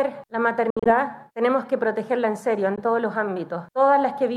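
Gaps at 0.70–0.93 s, with about 107 ms lost across about 152 ms (longest hole 61 ms), and at 2.76–2.80 s (about 15 ms) are likely Bluetooth dropouts, with late packets discarded and the sound resuming as if it had played on.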